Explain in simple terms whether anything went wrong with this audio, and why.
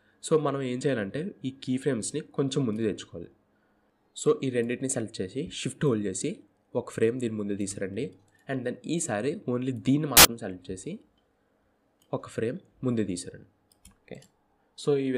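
Something did go wrong, briefly. From 10.17 to 10.25 seconds, a burst of loud, harsh noise covers the sound. This is a case of samples built from the wrong bytes. Each digital sample is stored as a few bytes. Here the player stitched them together in the wrong order or position. The tiny, jittery parts of each value became the big parts. That turns the sound into harsh, loud noise for those 80 milliseconds.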